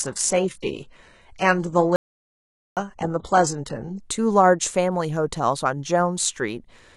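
From the start until 4.0 s, the speech sounds dull and smeared, with the top end thin or synthetic, nothing above roughly 11.1 kHz, and compression artefacts stronger. At 4.0 s the sound suddenly becomes clearer, with no break in the flow. This is an adaptive stream starting at a low bitrate: the player began on a cheap version to get going fast, which fits HE-AAC at around 12 kbit/s. Once it had gauged the connection, it switched up to a version consistent with AAC-LC at about 96 kbit/s.

From 1.96 s to 2.77 s, the speech cuts off abruptly and the audio falls to dead digital silence for about 0.81 s, with no room tone underneath, before resuming mid-flow. This is an audio dropout to silence. The likely cause is that the input was briefly lost, through a dropped connection, a failed link or an accidental mute, while the encoder kept writing silence, so whatever was said during that gap is gone.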